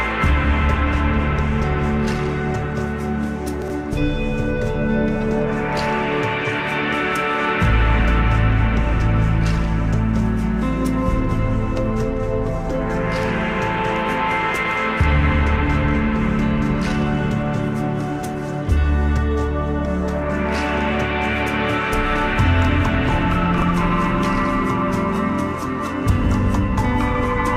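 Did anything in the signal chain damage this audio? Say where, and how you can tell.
Yes. Chunks out of order in the buffer: 20 ms chunks played late (three slots at 3.62–3.70 s, one at 23.58–23.62 s), making brief jumbled moments.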